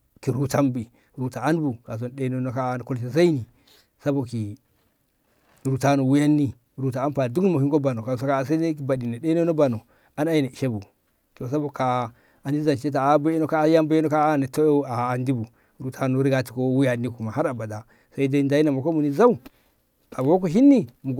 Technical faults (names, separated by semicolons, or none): none